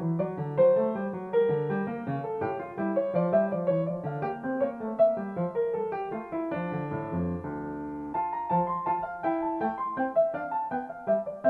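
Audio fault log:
There is no fault in this audio.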